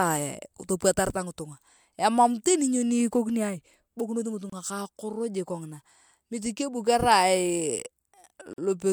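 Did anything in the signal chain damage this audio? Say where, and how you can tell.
Yes: codec stage, gap at a join of encoded pieces. Untrimmed encoder delay and padding open brief silences in the speech, about 27 ms at 4.50 s and 46 ms at 8.53 s.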